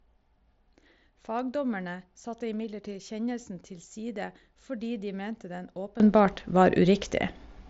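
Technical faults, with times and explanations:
6.0 to 7.7 s, sudden gain jump: Right after "fordi de mente den", the level steps up by about 17 dB in a single instant and stays there to the end, most likely a digital gain setting applied without any ramp between samples. Because the change happens at one sample rather than over a fade, the speech and the background noise beneath it leap louder together, on an mSBC headset path already capped near 7.7 kHz.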